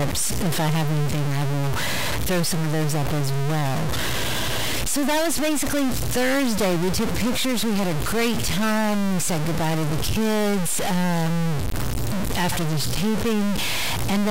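Stuck bit distortion runs through the entire speech recording. A harsh, buzzy grit rides on everything, and even the pauses fill with a noise floor. The likely cause is a single data bit held fixed by a broken line or converter. Wherever the waveform would have flipped that bit, the sample lands off by a step of about -20 dBFS. Because that step is so large, the error sits well above any quiet passage.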